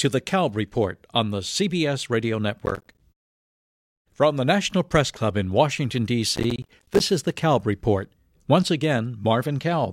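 At 2.66 to 3.01 s, and again from 6.36 to 7.00 s, the speech picks up a gritty burst of processor overload crackle. The machine couldn't finish its short audio buffers in time, so a run of them dropped out as tiny silent holes with hard edges. The spacing points to buffers of around 10 ms, with something like twenty misses in each burst, and the tearing stops once the load eases.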